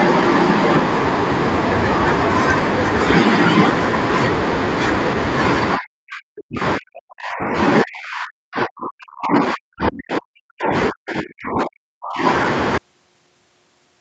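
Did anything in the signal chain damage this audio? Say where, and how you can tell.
Yes, in the call processing. The speech gets pushed down hard in three stretches, 5.77 to 7.55 s, 7.84 to 10.73 s and 10.89 to 12.24 s, with drops of about 40 dB that chop parts of it away. That pattern likely points to speech suppressed in double talk: the echo canceller couldn't tell the near talker from loudspeaker echo while both sides spoke, so it turned down everything.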